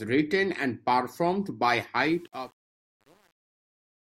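Truncation distortion on a fade starts at 2.01 s, just after "written and performed by", and runs to the end at 4.11 s. The speech fades out from about 2 s without a hard edge. But the fade stage keeps too few bits and adds no dither. The grit points to an 8-bit stage. The quiet tail collapses into coarse square steps. From 2.21 s on it sounds rough and gritty.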